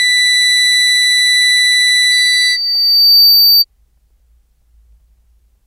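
A microphone picked up the loudspeaker it was feeding, and at 4.6 kHz the loop gain rose above one. From 2.11 s to 3.65 s, this loudspeaker feedback squeal swells over about a second into a piercing tone that ends up a few decibels louder than the music.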